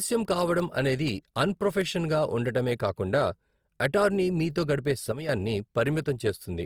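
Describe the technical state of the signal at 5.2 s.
At 5.2 s there is a sudden gain jump, lasting from 5.12 to 5.29 s, right after "అటార్నీ మీతో గడిపే". Speech and background noise drop together by about 8 dB. The waveform envelope shows an abrupt step down and back up, likely from a gain change applied without a ramp.

Opus compression also affects this moment, as it does the whole clip. Plainly audible grainy, rough texture covers the speech. On a spectrogram the upper bands look noise-filled rather than holed, and content reaches about 20.3 kHz. This likely points to Opus in its music mode at a low rate around 24 kbps.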